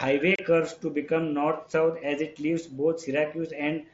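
At 0.36 to 0.39 s, just before "curves to become", the speech drops into a hole of about 30 ms with hard edges. This is unconcealed Bluetooth headset packet loss, which fits roughly four lost mSBC frames. Nothing was filled in, so the gap is silence or an idle pattern rather than a smeared or repeated fragment. The wideband mSBC sound around the gap marks it as a headset link fault.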